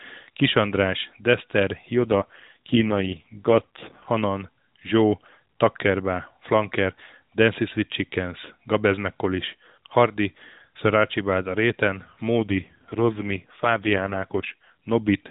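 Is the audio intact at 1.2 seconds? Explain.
Yes, at 1.2 s the speech runs on intact, with no dropout, click or other fault at that moment.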